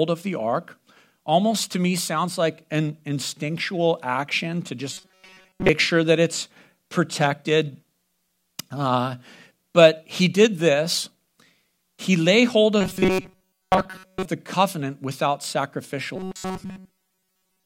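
Robotic sound from repeated short buffers at 4.93–5.69 s, 12.81–14.25 s and 16.16–17.65 s: the speech becomes a rigid, metallic buzz at 188 Hz, likely from a roughly 5 ms snippet being looped while most of the real audio is skipped.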